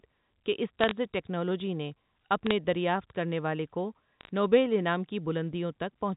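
Three short bursts of bit errors on a digital phone line show up in this speech, at 0.81 to 0.91 s, 2.47 to 2.51 s and 4.21 to 4.29 s. Flipped bits in the G.711 A-law stream each corrupt a single sample, and when a high-order bit, or the sign of a loud sample, gets hit you hear a sharp tick. One to two tenths of a percent of bits going bad gives brief patches of crackle over speech that's still fully intact underneath.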